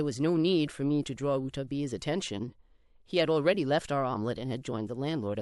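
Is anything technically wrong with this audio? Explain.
No, nothing technically wrong stands out here; the speech comes through without any audible problems.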